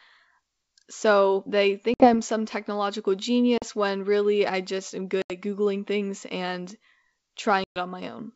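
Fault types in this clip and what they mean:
Packet loss on an ADPCM call: four hard-edged silent holes, from a 40 ms gap right after "some technological" up to a 120 ms one near 7.6 s, each a few packets' worth. The G.722 link underneath stays clean, so the damage is the gaps plus the recovery. Once the silence ends, the decoder's predictor and step size no longer match the sender's, so the speech re-enters a bit off until they re-align.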